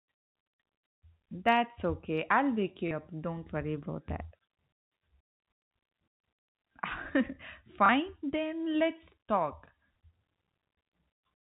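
At 2.88 to 2.91 s, just after "okay I'll wake", and at 7.86 to 7.89 s, just before "then let's talk", packet loss with last packet repeated replays one 30 ms chunk, causing a small blip, seen as a duplicated waveform block.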